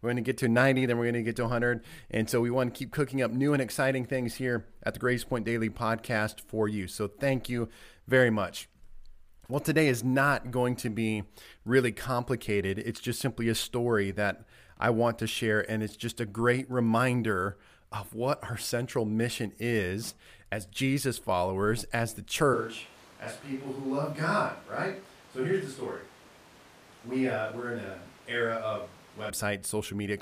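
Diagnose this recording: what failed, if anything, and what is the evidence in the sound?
Right after "followers as the", at 22.54 s, the speech turns roomy, hollow and bass-light, roughly 5 dB quieter, with room noise only about 25 dB down. It snaps back at 29.3 s. That's likely a switch to a distant microphone at capture, after the close mic dropped out.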